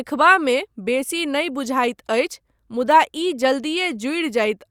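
No technical faults can be heard anywhere in this speech recording; the signal stays continuous and stable throughout.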